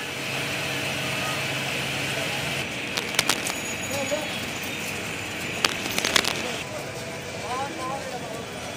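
A burst of dense, uneven scratching and rustling sits over the sound from 2.86 to 3.52 s, at about the same level as the sound itself. A second, somewhat louder burst follows from 5.63 to 6.42 s. This is cable scratch noise, likely from a worn cable, connector or control being moved. Its contact resistance then jumps around rapidly, adding ragged noise to the signal for as long as the movement lasts.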